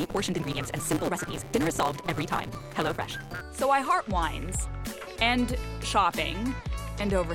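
From the start to about 3.42 s, a block size mismatch (truncated) runs the audio: one stage writes longer blocks than the next reads, so the tail of each block is discarded. The result is a buzz at 172 Hz, which fits a 256-sample read, and playback about 1.88 times fast while pitch stays near normal. That unchanged pitch separates it from a simple sample-rate error, where speed and pitch rise together.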